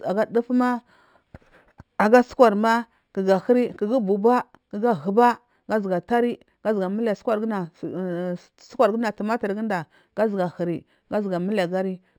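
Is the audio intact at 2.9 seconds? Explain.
No. At 2.9 s, as throughout the speech, there is imaging from linear upsampling. Raising the rate from 12 kHz to 48 kHz by straight-line interpolation dulls the top of the band and leaves a faint mirror image, roughly 35 dB down, between 6 and 12 kHz. It is heard as a light metallic shimmer on sibilants.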